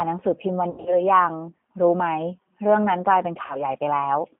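It's a short piece of speech that's gone through the G.729 codec the whole way, and the damage is plainly audible: the voice has that slightly rough, synthetic edge you get when an 8 kbit/s coder rebuilds everything from a filter, a pitch guess and a handful of pulses, and the line band is squeezed to roughly 150 Hz to 3.4 kHz, so there's no air or top end at all. On top of that there's VoIP packet loss concealed by the speech codec, twice. From 0.70 to 1.05 s about 140 ms of audio goes missing in patches spread over 160 ms, the longest run being 80 ms, which fits 20 ms packets dropping in clusters. The decoder keeps extending its last pitch and filter and lets the gain sag, so the sound smears into a buzzy tone or coloured noise that fades, and stays weak for a bit after the packets come back. A smaller 40 ms hole from 3.46 to 3.63 s does the same thing more briefly.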